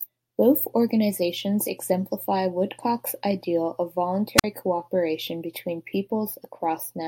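At 4.37 s, right after "ideal of", comes a wireless microphone squelch dropout lasting until 4.44 s. The radio link from the transmitter weakens, a brief surge of hiss rises, and the receiver's squelch shuts the output for about 47 ms before the speech resumes at "cooperation between". On a spectrogram, a short broadband smear of noise gives way to a blank vertical gap, and the waveform collapses to a near-flat line.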